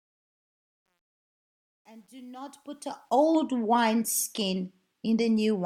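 A speech recording opens with a fade-in that ends at 3.39 s, and the rising level carries truncation distortion from 0.0 to 3.39 s. It is worst over the quietest stretch, 0.0 to 2.63 s, where the sound turns gritty. The fade stage appears to have kept too few bits without dither, roughly a 10-bit word length, so low-level waveforms collapse into coarse steps. Unlike a gate, the grit tracks the fade level rather than switching on and off.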